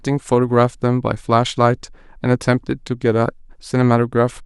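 Nothing in this speech recording stands out as a technical fault, so there's nothing here to flag.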